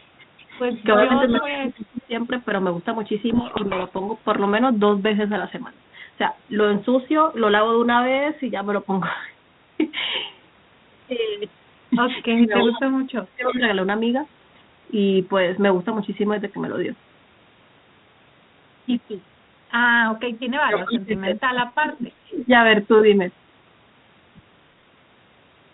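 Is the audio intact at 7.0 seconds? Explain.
Yes, the speech is intact at 7.0 seconds, with no fault at that moment.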